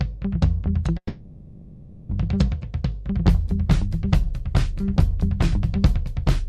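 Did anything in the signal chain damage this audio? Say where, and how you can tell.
Yes, there's a call audio freeze in the network stage, from about 0.97 s to 2.11 s. Right at 0.97 s the sound stops moving forward and the last bit gets stretched into a fading buzz for roughly 1.1 s, with a brief near-silent stretch of about 70 ms in there. Then it picks up exactly where it left off, nothing skipped, just 1.12 s later than before. That's likely packets stalling in transit and the jitter buffer running dry, with the receiver padding until they showed up.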